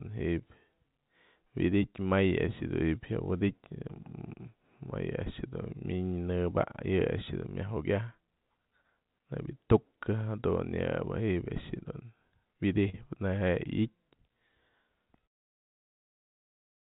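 Around 11.80 to 11.84 s, and again at 12.90 to 12.95 s, there's short concealed packet loss. About 20 ms, then 40 ms, of audio arrived too late, so the decoder stretched the preceding sound over the gap, leaving a brief smeared wobble in the narrow 4 kHz telephone-band audio.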